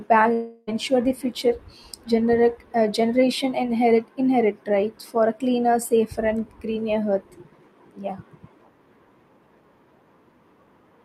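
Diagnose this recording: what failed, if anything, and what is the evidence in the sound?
From 0.33 to 0.69 s speech smears into a fading buzz, then resumes minus a chunk: likely a long network dropout the receiver concealed.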